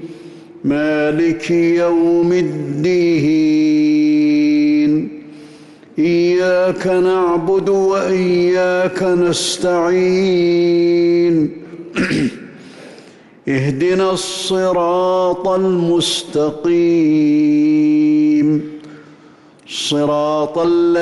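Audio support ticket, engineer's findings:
Listened all the way through and found nothing to chase down here, so there's no fault to log against this recording.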